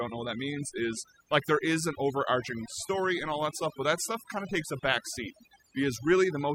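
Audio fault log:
throughout, overdone noise removal: the noise reduction is set far too hard, so frequency bands near the noise estimate are pulled down or switched off. Quiet parts of the speech go with them, leaving the speech over near-silence with twinkling specks, unlike steady hiss or a low-pass dullness.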